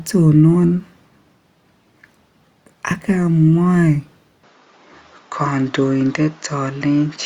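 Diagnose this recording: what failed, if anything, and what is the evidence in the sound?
From 4.43 s, the speech turns duller and loses everything above 7.3 kHz. A faint new noise floor appears about 50 dB down, with no gap or level jump. On a spectrogram the top band stops there, while the waveform runs on unbroken. This is likely an input switched to a poorer device at the driver stage.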